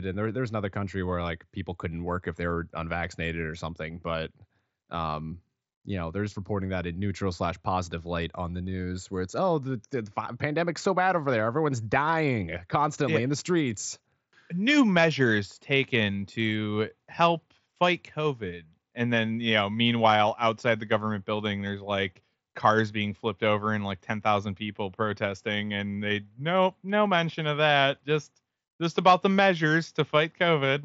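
Nothing goes wrong anywhere in this speech, which comes over a Bluetooth mSBC headset link with the usual wideband ceiling of about 7.7 kHz.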